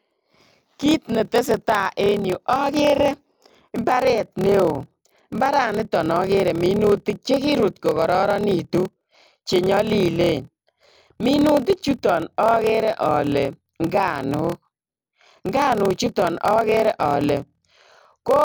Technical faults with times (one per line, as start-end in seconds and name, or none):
0.00-18.44 block size mismatch (padded)